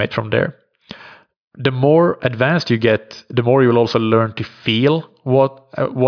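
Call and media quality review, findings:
No audible faults found.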